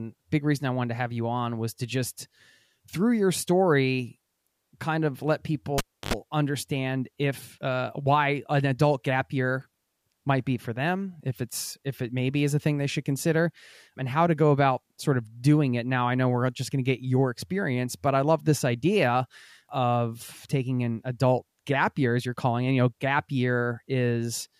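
A live cable was pulled and plugged in from 5.78 to 6.13 s, between "kind of let" and "understand if uh why". A pop drops the speech to near silence for 303 ms, then a 79 ms burst of 50 Hz mains buzz and a second pop bring the sound back.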